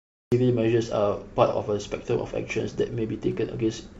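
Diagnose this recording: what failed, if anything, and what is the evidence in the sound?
The capture or stream started late, a cut-off start. The file holds digital silence from 0 to 0.32 s, and the speech then enters abruptly partway through a sound, with no natural onset. This points to recording or stream initiation at the storage/capture stage.

At 1.46 to 1.53 s there is AAC frame loss with concealment, a codec and network fault. A brief smeared, phasey patch lasting about 43 ms fits a single lost frame. The decoder filled the gap by extrapolating from the preceding spectrum instead of reproducing the real signal.

From 2.45 s to the end, a steady tick repeats every 102.4 ms, about ten times a second, some 35 dB below the speech. This is Wi-Fi interference in the analogue wiring. A nearby radio's beacon bursts are rectified by the audio circuit and heard as periodic clicks.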